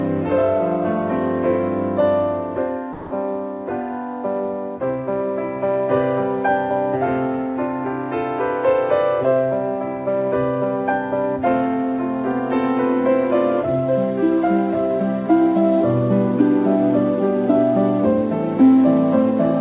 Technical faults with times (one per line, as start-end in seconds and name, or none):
2.93-3.11 sound dropped by the voice detector